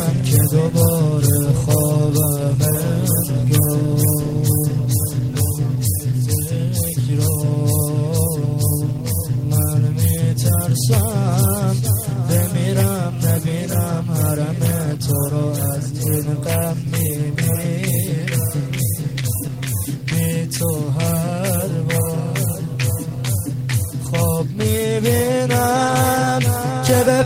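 Nothing in this audio sounds wrong from a technical point of view, so there's honestly nothing to point at here.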